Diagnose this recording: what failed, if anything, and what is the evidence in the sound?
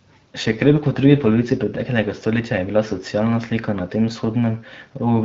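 An AMR rate drop at the codec, triggered by network link adaptation. From 0.43 to 1.68 s, before "stoletja je bila socialna", the speech turns rougher and more synthetic, with no gap and no bandwidth loss. That fits AMR-WB stepping from 12.65 to 8.85 kbit/s, trading speech bits for error protection.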